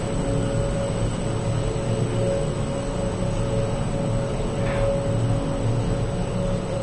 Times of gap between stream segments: none

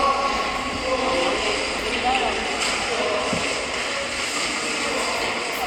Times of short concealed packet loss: none

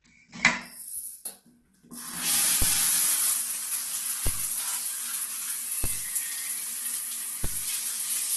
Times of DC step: 2.62, 4.27, 5.84, 7.44

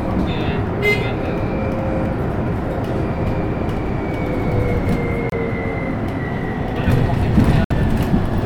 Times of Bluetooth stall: 5.30-5.33, 7.64-7.72

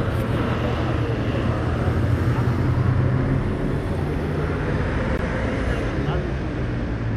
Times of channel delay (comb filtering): none

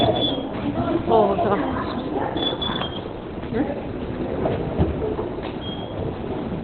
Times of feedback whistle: none

